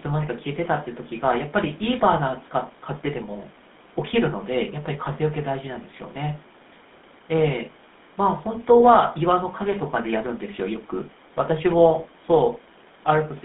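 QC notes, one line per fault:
Throughout, GSM full-rate codec: band of 200 Hz to 3.6 kHz with buzzy, gravelly roughness from pulse-driven excitation, unlike clean band-limiting; fits a 13 kbit/s coder.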